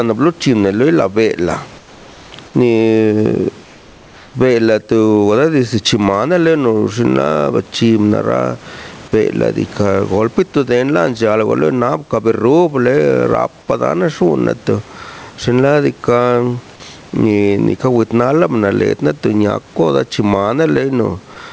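Input gain set far too high, with a fast limiter or compressor likely clamping each loud moment, produces gain pumping throughout: the level swings by something like 15 dB, leaving the speech squashed and flattened in dynamics.

From 1.78 to 2.32 s and again from 3.64 to 4.34 s, the sender likely stopped transmitting during pauses, and the receiver filled them with comfort noise in place of the background. The real room sound gives way to a smooth, detail-less hiss about 3 dB quieter, which lasts until the speech resumes.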